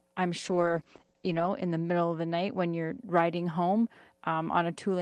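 From 0.46 to 3.05 s the speech turns rough and muffled, highs cut from 12 to 8 kHz: a call bitrate drop, fitting roughly 10 kbps.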